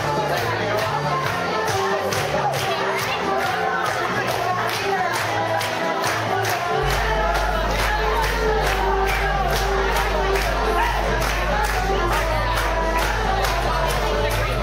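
Mains hum enters at 6.83 s and continues to the end: a steady 50 Hz tone with low harmonics, nearly as loud as the audio itself, from a ground loop or nearby transformer. A spectrogram shows unbroken horizontal lines at 50 Hz and its multiples; the waveform, a constant low ripple.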